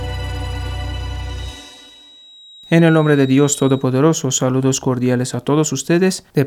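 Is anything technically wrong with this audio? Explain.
Yes. From 1.29 to 3.88 s there is a feedback whistle. The likely cause is a loudspeaker-to-microphone loop sitting just at the edge of instability, so a single frequency keeps circulating without building into a full howl. In the sound, a thin, steady tone at 3.8 kHz runs behind everything, well below the main level, roughly 25 dB down, and its loudness swells and fades slowly until it drops away.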